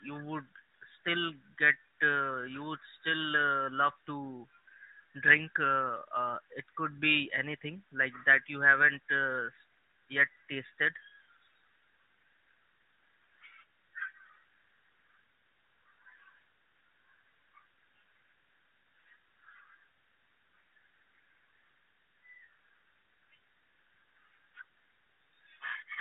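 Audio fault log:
Nothing stood out on listening to this speech recording.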